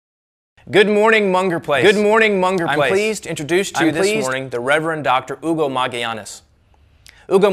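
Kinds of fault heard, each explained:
Doubled audio track: speech overlaps a full-band copy of itself about one second late, equally loud, from 1.75 to 4.33 s, likely from a second out-of-step capture path.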